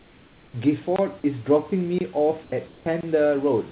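Short speech recording that's gone through a call path with a G.711-style narrowband codec, so nothing above 4 kHz. First there's comfort noise in place of the background from 0 to 0.54 s, and again at 2.44–2.52 s and 2.68–2.86 s. The real room hiss gets swapped for a flat, featureless fill, about 4, 1 and 2 dB quieter respectively, likely because the sender's discontinuous transmission stopped sending during pauses. There's also a gap between chunks at 0.96–0.99 s, a 23 ms hole right at the one-second join, which fits audio delivered in 1 s chunks with a bit of padding or a late start on the next one.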